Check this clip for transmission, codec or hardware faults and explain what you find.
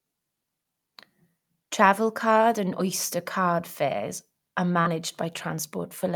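There's one transmission fault here. Around 4.81 to 4.87 s there's a short concealed packet loss: about 40 ms of the call arrived too late, so the receiver extended the preceding sound to bridge the gap and blended back in. You hear it as a quick smear in the speech.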